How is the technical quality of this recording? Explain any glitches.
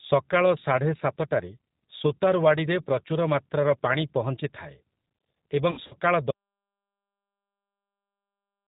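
The recording has three clear problems: a low-bitrate phone codec throughout, a burst of lost packets near 5.7 s, and a cut to silence that lasts to the end.

The G.729 codec colours the whole clip, and the damage is plainly audible. It runs at 8 kbit/s. It does not send the waveform. It sends a vocal tract filter, a pitch predictor and a few pulses per short frame. Nothing above 4 kHz survives. The speech sounds dull, slightly rough and synthetic.

From 5.71 to 5.95 s there is VoIP packet loss concealed by the speech codec. About 100 ms of audio went missing, scattered over roughly 200 ms. The longest gap is 60 ms, which fits a few consecutive 20 ms packets. The decoder filled each hole by repeating its last pitch and filter at falling gain. The speech smears into a buzzy tone or coloured noise that fades. It sounds weak for a moment after packets return, because each frame builds on the last.

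At 6.31 s there is an audio dropout to silence. The sound cuts off mid-flow. From there to the end the signal is silent, with no room tone at all. The likely cause is a lost input, such as a disconnected device or a failed link, while the recorder kept writing empty samples. Anything said after that point is gone.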